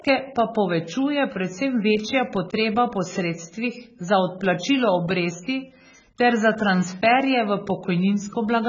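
Speech marred throughout by heavy AAC compression damage: it sounds dull and smeared, with fizzy, warbling sibilants. A spectrogram would show a hard ceiling near 7.1 kHz, which fits AAC-LC at a very low bitrate, likely around 16 kbps.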